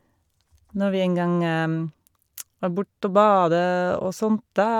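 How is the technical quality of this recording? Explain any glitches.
Nothing stood out on listening as a technical problem with this speech recording.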